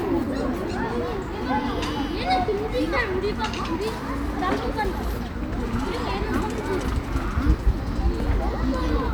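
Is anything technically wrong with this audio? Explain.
Yes. At 4.01 s and again at 4.85 s the recording software most likely failed to collect its incoming samples before the hardware overwrote them, a dropped buffer (overrun). That stretch of audio is lost and the surrounding material is spliced together with no gap, so each spot sounds like an abrupt jump forward in the sound. The first skip is the larger, a few tens of milliseconds; the second is only about a hundredth of a second.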